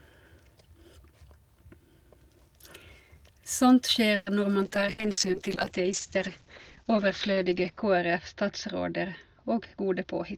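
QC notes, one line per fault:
4.15–4.29 s, call audio freeze: the sound stalls into a fading continuation of the last sound for about 110 ms, then picks up where it left off, likely from held-up packets draining the jitter buffer.
4.63 s to the end, call bitrate drop: coding falls from 48 to 8 kbps and the top end drops from 20 kHz to 8 kHz, so it turns muffled and watery, bottoming out for about 3.2 s.
4.92–5.07 s and 5.11–5.20 s, burst of packet loss: each time about 60 ms gets papered over with a fading continuation of the last sound, then it jumps ahead with that chunk gone.
9.74–10.05 s, jitter buffer speed-up: the receiver trims tiny pitch-period slices, around 40 ms in total, so things run about 10% faster at the same pitch and feel a bit rushed.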